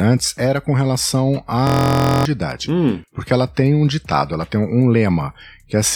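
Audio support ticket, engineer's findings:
System hang loop, 1.67–2.25 s: steady buzz at about 43 Hz. A 23.2 ms segment repeats exactly, 25 times, which fits a 1024-sample ring buffer replayed while the host or driver stalled. Roughly half a second of speech is lost. Unlike a dropout or jitter stutter, the repeats are identical and evenly spaced, giving a fixed-pitch tone instead of gaps or irregular skips.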